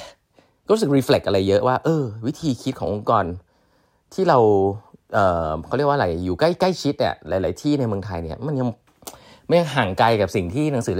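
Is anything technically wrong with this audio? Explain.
No, nothing technically wrong.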